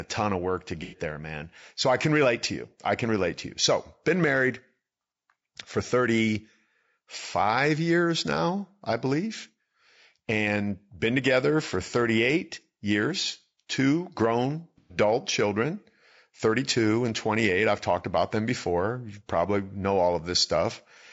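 The whole speech clip sounds rough and grainy, with noise between the harmonics and a synthetic top band, likely low-delay AAC compression at a low bitrate around 32 kbps. At 0.83–0.98 s, between "ton of work to" and "there man", there's AAC frame loss with concealment: about 90 ms went missing, and the decoder patched it from the previous spectrum, leaving a smeared, phasey blur. It happens again at 14.78–14.98 s, right after "years two grown", this time about 120 ms, with the same noisy smear.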